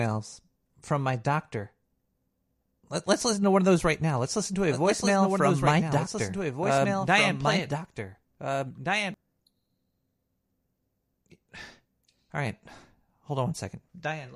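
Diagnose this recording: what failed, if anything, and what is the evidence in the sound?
Doubled audio track, 4.68 s to 9.14 s, beginning right after "listen to": a dry, full-band copy of the speech trails by around two seconds, about 5 dB quieter, with no room colour, and cuts in and out abruptly. Likely an edit or slower second capture path.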